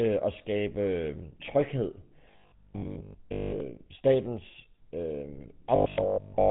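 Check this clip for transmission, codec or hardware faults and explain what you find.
Two faults are audible: a codec roughness across the whole recording and a short robotic stretch at the very end.

From start to finish the speech has a buzzy, gravelly edge, and everything above about 3.9 kHz is missing, leaving it dull and boxy. This is the GSM full-rate codec, which fits a 13 kbps GSM full-rate stream. The codec models the vocal tract and drives it with a sparse, regularly spaced pulse train that keeps only every third excitation sample. That coarse excitation produces the grit, and the codec's narrow passband removes the top end.

From 5.76 s to 6.50 s the speech turns into a rigid, metallic 50 Hz buzz that still loosely follows the speech contour. This is robotic sound from repeated short buffers, and the likely cause is audio arriving too seldom. The playback side fills each gap by looping the most recent chunk, so most of the stretch is repetition while the real audio is skipped. 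A 50 Hz buzz fits a repeated 20 ms buffer.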